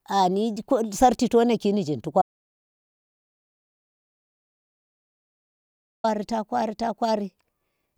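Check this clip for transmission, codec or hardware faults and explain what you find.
One fault is present: an audio dropout to silence in the speech. From 2.22 s to 6.04 s the sound cuts off abruptly after "sarchi to naki nzyin" and returns mid-flow at "ta kwari ta". The gap is silent with no room tone, and about 3.8 s of speech is lost. The input likely dropped out through a disconnect, link failure or mute while the recorder kept writing silence.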